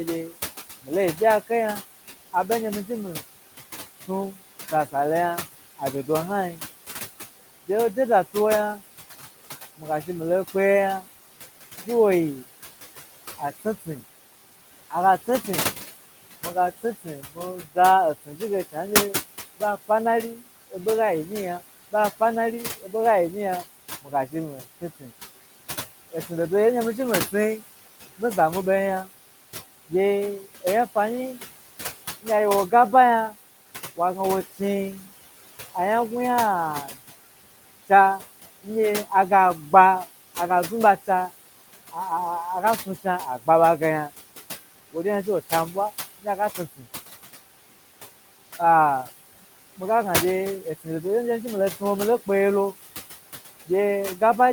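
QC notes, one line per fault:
Throughout: noise suppressor artifacts. The background sinks by about 16 dB whenever the speech pauses, then swells back under each phrase, and the leftover room noise sits about 13 dB below the speech. The suppressor estimates the steady noise and pulls down each frequency band, frame by frame, wherever it judges noise dominant. Those per-band gains keep changing from frame to frame.
0.29–46.86 s: speech cut by the noise suppressor. Quiet consonants and trailing word endings sound swallowed, dipping by as much as about 17 dB, adding up to roughly three seconds. The suppressor mistook these low-level parts of the speech for background and attenuated them along with it.
48.59–54.52 s: speech cut by the noise suppressor. The same swallowed endings and faint soft sounds recur to the end, with the deepest dip about 12 dB, because the suppressor again classed weak speech energy as noise.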